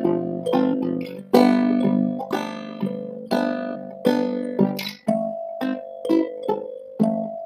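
Throughout the music, overlap-add ripple from frames whose overlapped windows do not sum evenly pumps the level about 11 dB around 50 times a second, a rough flutter seen as regular stripes on the waveform envelope. Damaged data in a compressed stream at 0.72–0.74 s, 3.74–3.76 s and 6.27–6.29 s makes the decoder lose sync, giving brief glitches that show as short disruptions on a spectrogram.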